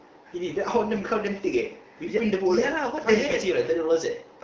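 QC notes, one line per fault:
1.02–1.04 s and 3.29–3.34 s, AMR bit errors: two brief bursts of hoarse, scratchy, gargly sound. Pitch and level hold steady. The first fits one corrupted codec frame, the second about two. Roughly one bit in twenty of the weakly protected data arrived flipped. The check on the key bits still passed, so the frames were decoded. Misplaced excitation pulses and wrong gain and spectrum values cause the rasp. The wideband AMR coding around them sounds clear.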